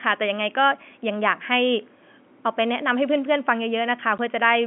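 Packet loss filled with silence at 4.18 s: one 10 ms packet went missing and the receiver played silence, cutting a brief gap in the speech with hard edges.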